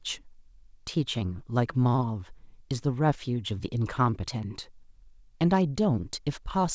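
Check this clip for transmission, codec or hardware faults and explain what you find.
No transmission, codec or hardware faults are audible here.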